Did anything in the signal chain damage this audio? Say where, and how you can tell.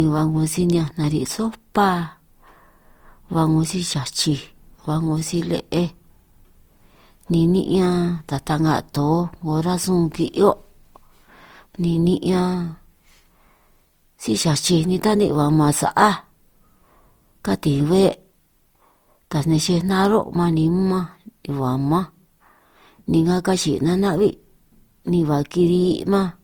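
Yes, at the codec stage: generation loss throughout this speech. It sounds swirly, hollow and smeared, with blurred attacks. The likely cause is roughly four Opus passes at 48 kbit/s, each requantising on a shifted frame grid. A spectrogram shows nothing above 20.2 kHz.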